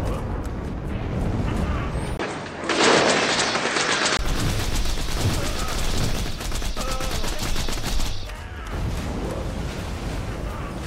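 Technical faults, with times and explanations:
2.17–4.19 s, input switched to a poorer device: the top end drops away, with nothing above 8.7 kHz, a new background noise sits well below the signal, and a 20 ms gap marks the switch, with no clear level change. The likely cause is a narrower-band input device.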